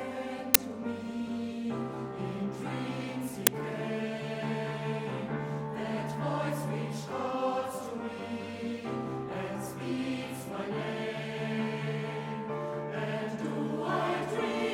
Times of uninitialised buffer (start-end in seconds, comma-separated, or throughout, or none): 0.54, 3.47